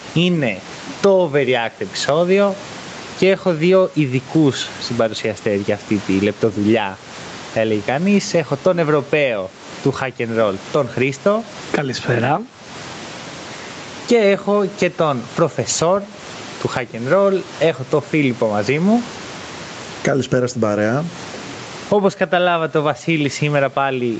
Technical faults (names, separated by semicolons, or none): gain pumping